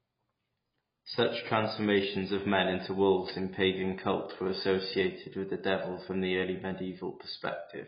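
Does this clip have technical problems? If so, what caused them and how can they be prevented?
Yes. AAC compression damage runs through the whole clip: the speech sounds dull and smeared, with nothing above about 5.1 kHz and a warbling, fizzy texture on sustained sounds and sibilants. The cause is likely an AAC-LC encode at a very low bitrate, around 16 kbps by the sound of it, where the encoder drops the top of the spectrum and coarsely quantises what remains, leaving gaps. Encoding at a higher bitrate, or keeping an uncompressed master, prevents this.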